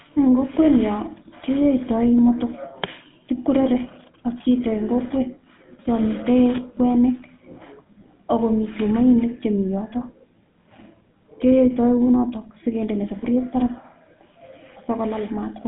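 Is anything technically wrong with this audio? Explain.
Yes. Throughout the speech, the audio carries GSM full-rate codec damage. This early mobile codec models the vocal tract and drives it with a sparse, regularly spaced pulse excitation, which fits a 13 kbps rate. The result is a plainly audible buzzy, gravelly roughness over the voice, with the band held to about 150 Hz to 3.6 kHz. A simple telephone-band filter would sound muffled but clean; this grainy texture is what marks a codec.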